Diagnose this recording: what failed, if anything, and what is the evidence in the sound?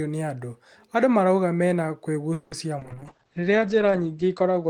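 At 2.33 to 2.53 s the speech hangs as a fading buzz, then resumes intact: a call audio freeze, likely delayed network packets draining the jitter buffer.

A brief smear at 2.79 to 2.83 s is short concealed packet loss: 20 ms never reached the decoder, which patched the hole by extending the preceding sound.

From 2.82 s onward the speech turns rough and muffled, losing everything above 8 kHz: a call bitrate drop, with the Opus codec falling from 32 to 9 kbps.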